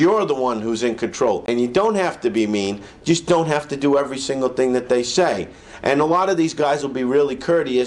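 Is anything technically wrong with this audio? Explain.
Yes. At 1.46 to 1.48 s there is AAC frame loss with muting. About 21 ms of audio goes missing, which fits one lost frame. The decoder zeroes that frame's spectrum. Overlapping windows fade the sound out and back in, leaving a brief, soft-edged gap.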